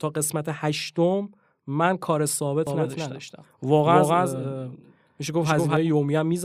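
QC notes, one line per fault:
2.67–5.77 s, doubled audio track: a second, equally loud copy of the speech trails about a fifth of a second behind, starting and stopping abruptly, likely from a duplicated capture path.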